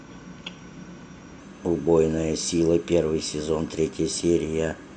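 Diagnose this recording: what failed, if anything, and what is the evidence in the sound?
From 1.40 s to the end, the speech jumps up in pitch by about 1.5 semitones and runs 1.09 times faster. That's a wrong sample rate at playback: the samples are clocked out with no conversion, which fits 22 kHz material being played at 24 kHz.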